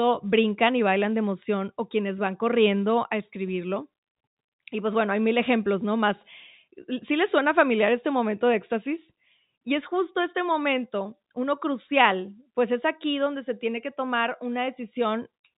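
No technical faults can be heard in this speech clip. It comes through G.711 telephone coding, so nothing above about 3.8 kHz is present, and any quantisation noise riding under the voice is faint at most.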